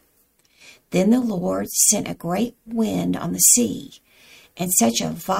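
A tick recurs roughly once a second from 1.25 s to 4.78 s, about four in all, at a steady rate. These are word clock ticks: the receiving device runs on its own clock, drifting by roughly 20 ppm from the sender's, so each slip drops or repeats a single sample.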